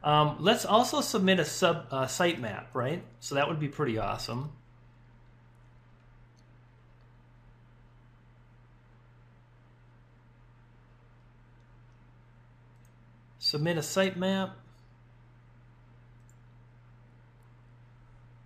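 No technical faults are audible.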